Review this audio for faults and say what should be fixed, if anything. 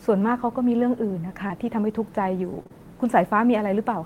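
Short concealed packet loss at 1.47–1.51 s, 2.63–2.67 s and 2.67–2.71 s: about 20 ms of speech missed the decoder each time. The receiver extended the preceding sound, so each spot has a brief smear, and the last two run together into one blurred patch.

Lost packet rebuilt from error correction at 1.49–1.51 s: one lost packet was replaced by the low-bitrate copy in the next packet. That 20 ms is rougher and noisier rather than silent.

To prevent both, reduce packet loss and late arrival on the network path, and give the jitter buffer enough depth that packets arrive before they are due.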